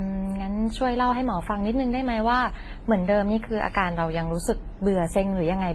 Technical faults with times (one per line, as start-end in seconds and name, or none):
0.00-5.74 transcoding between lossy codecs